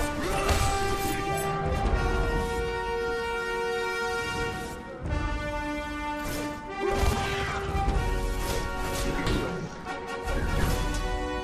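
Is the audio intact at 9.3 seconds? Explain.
No. At 9.27 s there's damaged data in the compressed stream: the decoder loses sync on the corrupted frame, leaving a short blip.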